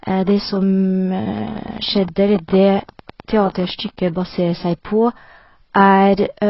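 Speech heavily damaged by what is likely low-bitrate AAC-LC compression, with a steady run of clicks in the middle. The encoder appears to have been starved of bits, consistent with a rate around 16 kbps. It quantised the spectrum coarsely against its hearing model and pulled the bandwidth down so that nothing remains above 5.5 kHz, leaving the speech dull and smeared with a warbling, fizzy texture on sibilants throughout. From 1.38 s to 4.09 s, a pulse source, likely interference from nearby equipment or a faulty connection or power supply, injects a train of clicks at a regular 10 per second. That is about thirty similar-shaped pops, peaking roughly 5 dB above the speech, heard as an even ticking laid over the sound for those 2.7 seconds.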